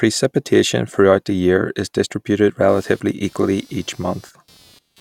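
From 2.68 s, just after "the year is distributed", computer activity noise sets in and runs to the end: a buzzing pulse train around 200 per second, roughly 35 dB below the speech. Processor or peripheral load is modulating the shared ground of the audio circuit.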